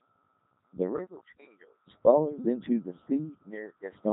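Throughout the clip, the speech has passed through a Codec 2 vocoder, which fits its highest 3.2 kbit/s mode. Only pitch, voicing, energy and a spectral envelope survive, and the decoder rebuilds the voice from sine waves. The result is heavily robotic and buzzy, with nothing above 3.8 kHz.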